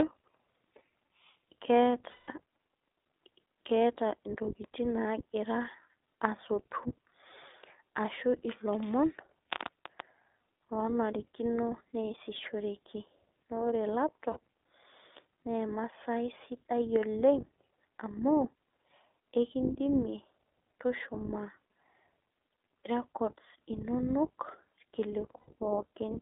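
A thin, telephone-band speech recording runs the whole way through with a slightly rough, synthetic edge, the mark of the iLBC codec. Only roughly 300 Hz to 3.6 kHz survives, so sibilants lose their sharpness and the low body of the sound is missing. The coding damage is plainly audible, and the character fits iLBC's 15.2 kbps mode with 20 ms frames, each coded on its own. Three times the sound briefly freezes into a held, faintly buzzy tone: from 2.10 to 2.30 s, from 14.32 to 14.37 s, and from 25.38 to 25.50 s. These are lost iLBC frames, gaps of about 180 ms, 40 ms and 100 ms where packets failed to arrive. The decoder filled each gap by repeating the last pitch cycle blended with noise, fading it over the longer dropouts. Because every frame decodes independently, the voice returns to normal almost immediately after each gap.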